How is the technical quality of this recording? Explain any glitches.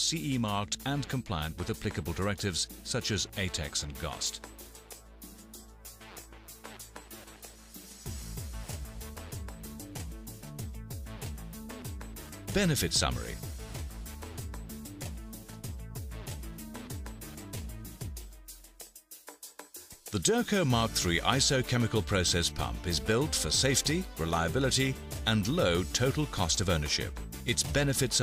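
The technical quality of this recording is sound, with no glitches to explain.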